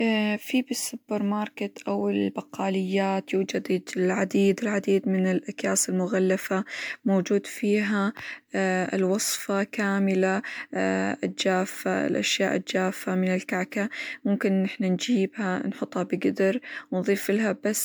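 Across the whole speech clip the sound has a swirly, smeared, hollow quality, with consonant attacks blurred, even though content extends up to about 20.1 kHz. This is generation loss, likely from around ten successive MP3 decode-and-encode passes at a rate near 130 kbit/s. Each pass requantises on a shifted frame grid, so noise and spectral holes accumulate beyond what that bitrate alone would produce.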